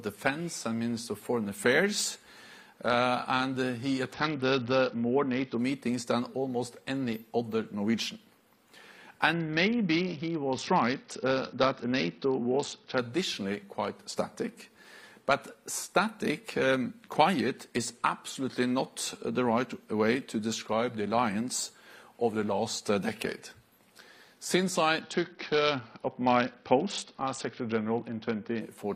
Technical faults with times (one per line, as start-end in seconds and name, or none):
4.13-5.58 Bluetooth SBC bit pool drop
9.33-12.99 Bluetooth SBC bit pool drop
25.01-28.61 Bluetooth SBC bit pool drop